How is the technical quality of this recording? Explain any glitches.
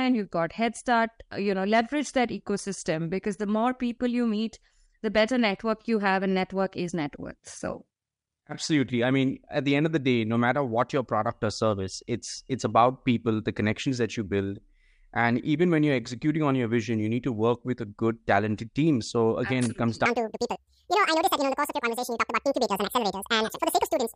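The recording has one clear fault, at the very end. From 20.06 s to 24.16 s, just after "it comes", there is a wrong sample rate. The speech runs at double speed and jumps a full octave higher, sounding squeaky and rushed. The samples are played back twice as fast as they were captured, with no conversion. That fits audio recorded at about 22 kHz being played at 44.1 kHz.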